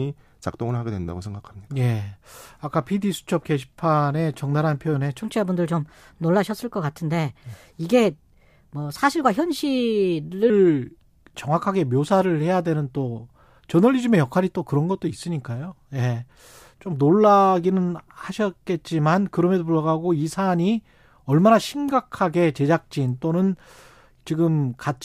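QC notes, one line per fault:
5.21–10.50 s, section at the wrong speed: the speech suddenly runs 1.19 times too fast, so the voice rises by about three semitones and the delivery sounds hurried, then drops back to normal at 10.50 s. Pitch and tempo jump together and return together, which separates this from a pitch shift alone or a time-stretch that keeps pitch. The likely cause is this stretch being played against a mismatched clock.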